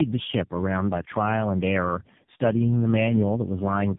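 Tandem speech coding runs throughout: it sounds like three narrowband codecs, each re-coding the last one's output, so it's rough and warbly, with nothing above 3.7 kHz.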